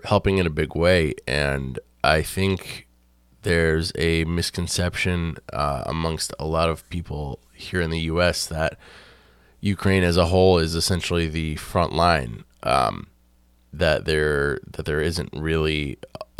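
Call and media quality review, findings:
No faults found in the speech audio on review. No follow-up action needed for this ticket.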